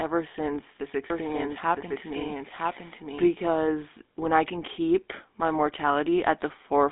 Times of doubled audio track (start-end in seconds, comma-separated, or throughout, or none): 1.10-3.32